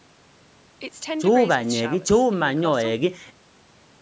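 Nothing in this speech recording points to a technical fault: the room's background noise sits about 44 dB below the speech, and the call's microphone processing leaves nothing above 8 kHz, which is expected of that path.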